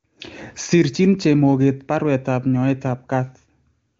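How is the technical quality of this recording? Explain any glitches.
No glitches to report: the speech shows the roughly 7 kHz ceiling of an AMR wideband (HD Voice) path, and the coding residue is faint at most, which fits the codec's top rate near 24 kbit/s.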